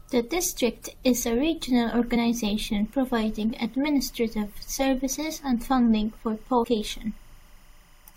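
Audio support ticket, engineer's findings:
Timecode bleed, 1.87 s to end, starting after "district is a": steady chirping warble about 35 dB below the speech, switching between roughly 1 and 2 kHz. 25 fps LTC leaking in from an adjacent track or cable.

Damaged data in a compressed stream, 2.13–2.17 s and 6.63 s: short squawk/blip events. Corrupt bytes in the compressed stream; the decoder loses frame sync and resyncs at the next header.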